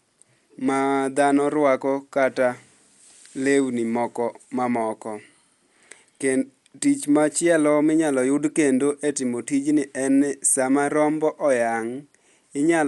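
Dolby Digital compression runs through the whole speech clip: nothing survives above 11.6 kHz, and the sound is dull, with a rough, fluttering noise clinging to tonal parts. This is likely a low-bitrate encode, around 64 kbps, where many frequency lines got no mantissa bits and were refilled with dither noise.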